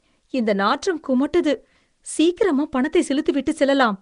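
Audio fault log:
throughout Nellymoser compression: likely Nellymoser Asao coding starving weak bands of bits and filling them with noise, leaving rough hiss, underwater smearing, nothing above 10.6 kHz.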